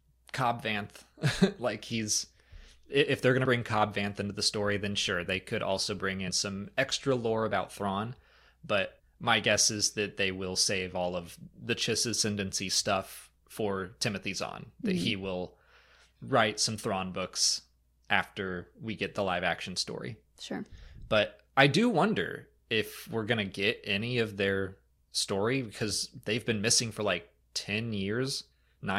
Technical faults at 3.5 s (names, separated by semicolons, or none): compressed frames skipped